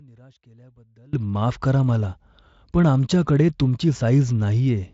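From the start to 1.13 s, the speech drops by about 30 dB to a faint copy. The level then snaps back. The likely cause is one stereo channel inverted in polarity. When the two channels are summed to mono, everything they share cancels. The centred voice nearly disappears, and only the small difference between the channels survives. What remains is a faint trace of the speech. The Speex-coded band, which ends near 7.7 kHz, carries little audible codec damage.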